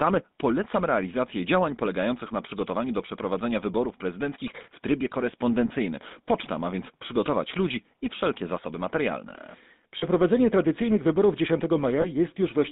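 Across the whole recording the speech has a buzzy, gravelly roughness, and the sound is confined to a narrow telephone band of roughly 150 Hz to 3.7 kHz, with nothing bright above it. This is the GSM full-rate codec. It rebuilds the voice from a vocal-tract model excited by coarse, regularly spaced pulses, and that is where the grainy texture comes from. The damage is plainly audible and fits the 13 kbps full-rate coder.

From 5.68 to 5.71 s the sound briefly sticks in a rough, metallic ring instead of moving on. A second, longer ring runs from 9.98 to 10.04 s, between "i wszelkie zasoby materialne" and "tradycyjnych wyborów". A third comes at 12.02 to 12.06 s. These are lost GSM frames. The decoder covered each gap by repeating the last good frame's settings. The first and third fit one missing 20 ms frame, and the middle one fits about 40 ms lost.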